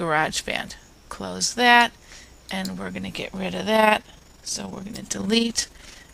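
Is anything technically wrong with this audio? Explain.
Yes. Overlap-add ripple runs from 3.76 s to the end of the clip. The audio has been split into windowed frames and rejoined with an overlap whose windows do not add up to a steady gain, so the level dips and recovers once per frame, by about 6 dB. That repeats at around 20 times a second, which is heard as a fast, rough flutter, a mechanical tremolo imposed on everything in that stretch.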